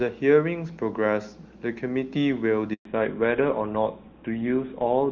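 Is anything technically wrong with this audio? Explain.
Yes, there are two related faults, both starting in the middle of the clip.

A handover gap runs from 2.73 to 2.85 s, about 120 ms. While the call was passed from one network to another, no speech frames got through, so the sound fades out within a few tens of milliseconds and stays silent until the new link takes over. Whatever was spoken in that stretch is simply missing, leaving an abrupt hole in the speech.

A fallback to narrowband follows immediately, from 2.85 s to the end of the clip. Before the gap the speech carries the full wideband range of HD Voice, with no or only faint coding damage. From 2.85 s the call drops to an older narrowband codec, and nothing above 4 kHz survives. The sound fits a switch from high-rate AMR-WB to GSM full rate. The speech turns duller, boxier and rougher.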